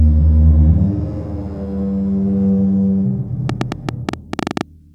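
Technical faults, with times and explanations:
3.49 to 4.62 s, train of clicks: likely interference or a faulty connection injects some fifteen similar pulses at an uneven ten or so per second, ticking well above the audio.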